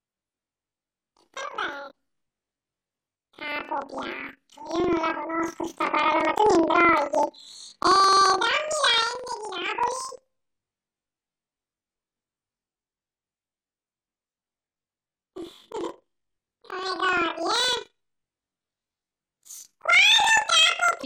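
Speech throughout, with planar audio read as interleaved. It sounds an octave high with a 23.4 Hz flutter, which fits 2048-sample blocks (about 43 ms) played left-then-right at double speed.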